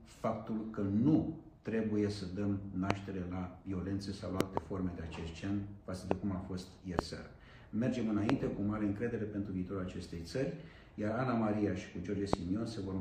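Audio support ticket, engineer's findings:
Loud pops at 2.91–2.93, 6.11–6.14, 6.99–7.01, 8.30–8.32 and 12.33–12.36 s. Double pop at 4.41–4.59 s. Sharp, about 25 dB above the signal, with the sound continuing beneath. Likely voltage spikes from a connector, switch or static discharge.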